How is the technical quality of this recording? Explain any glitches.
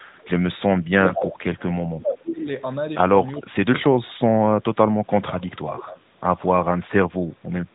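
The recording is marred by three kinds of network fault, heard through the band-limited narrowband sound of a mobile call with nothing above 4 kHz.

Echo leak appears at 0.17 to 0.3 s, 1.05 to 1.33 s and 5.4 to 6.46 s. The likely cause is a far-end echo canceller letting loudspeaker pickup through and sending it back. The result is a delayed copy trailing 394 ms behind. It is faint at first (about 30 dB down), nearly as loud as the speech at 1.05 s (about 5 dB down), and about 20 dB down later.

Speech suppressed in double talk runs from 1.14 to 2.47 s and from 3.38 to 4.5 s, where both sides overlap. The echo canceller, likely unable to separate the talker from the echo, pulls everything down. The voice dips by up to about 25 dB, for roughly a second and a half and then under a second.

Lost AMR speech frames occur at 4.06 to 4.13 s. Radio errors corrupted speech data, and the decoder stretched the last good sound with falling gain. 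The 40 ms gap, which fits two lost 20 ms frames, is heard as a drawn-out sound that fades, with the voice coming back weak or rough for a moment.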